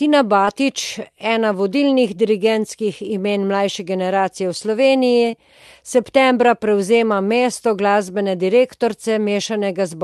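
A speech clip with two brief dropouts of short concealed packet loss, at 0.45 to 0.49 s and at 5.31 to 5.35 s, just before "septembra prevzema". Each time, about 20 ms of audio arrived too late. The receiver extended the preceding sound and blended back, leaving a short smear. The audio is band-limited near 12 kHz, which fits an Opus call path at about 40 kbps.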